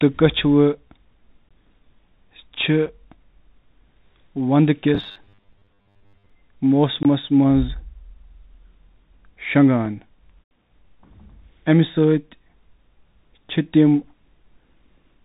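The whole clip runs through a Bluetooth CVSD headset codec. Nothing above 4 kHz survives, which fits a 64 kbps CVSD link, and the s sounds come out scratchy over a grainy hiss.

At 1.49 s the audio drops to a block of digital silence. There's a hard cut, heard as a short hole.

A second block of digital silence hits at 2.86 s. It's only about 5 ms long, so it comes across as a tick.

From 4.95 to 6.30 s there's a rigid, metallic 100 Hz buzz, robotic sound from repeated short buffers. The likely cause is a 10 ms chunk being looped while roughly half the real audio is skipped.

At 7.03 s comes one more block of digital silence, close to 20 ms, heard as a sharp gap.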